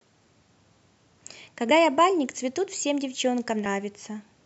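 At 1.71 s and 3.66 s the speech skips forward by roughly 50 ms, likely audio missing between chunks 2 s apart. The waveform shows an abrupt splice.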